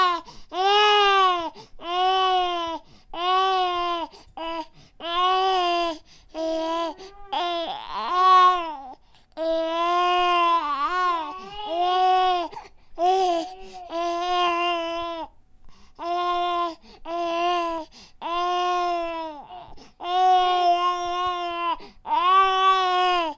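Nothing in the signal points to a technical fault at any point in the recording.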